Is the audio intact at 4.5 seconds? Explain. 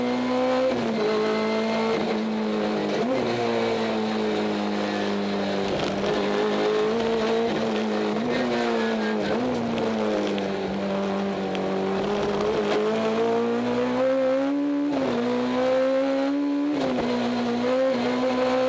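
Yes, the audio is intact at 4.5 seconds, carried through the WebRTC call path with nothing above about 8 kHz, as expected from a wideband call codec.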